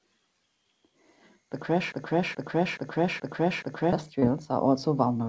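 From 1.92 to 3.93 s, a 426 ms fragment repeats exactly five times back to back: a broken-record loop, likely from a stalled player or stream resending its last buffer. At 4.20 to 4.24 s, a brief smear marks short concealed packet loss, where 20 ms of audio arrived too late and was synthesised from the preceding sound.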